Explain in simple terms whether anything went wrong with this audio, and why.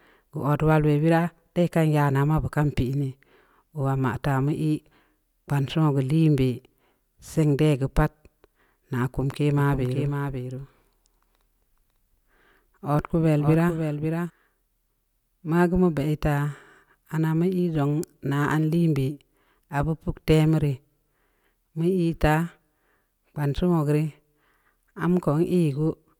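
From 9.58 to 14.3 s there is a doubled audio track: a slightly quieter copy of the speech trails about half a second behind, likely from a second, slower capture path.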